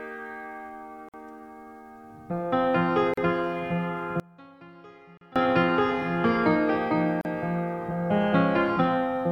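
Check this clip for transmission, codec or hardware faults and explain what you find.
Two kinds of fault are audible.

Gaps at joins of encoded pieces at 1.09–1.14, 3.14–3.17, 5.17–5.21 and 7.21–7.25 s, every 2 s. Untrimmed encoder delay and padding leave silences of 51 ms, then about 38 ms, with smeared edges.

From 4.20 to 5.36 s the sound drops by about 26 dB and turns faint, likely one channel inverted, so the common content cancels when the channels are summed to mono.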